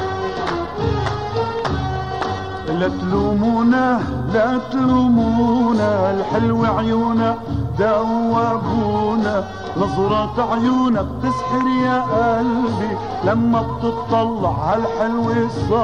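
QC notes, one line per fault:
No faults heard; nothing to flag for this clip.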